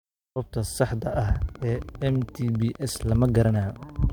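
Interference from nearby equipment, or a faulty connection or power supply, is the likely cause of the train of clicks that runs through this speech clip from 1.22 s to 4.11 s. Something injects a short pulse at a steady 14.9 per second, around forty in all, each much the same shape. They peak at roughly the level of the speech itself, so the ticking sits on top of the talking and carries on through the pauses.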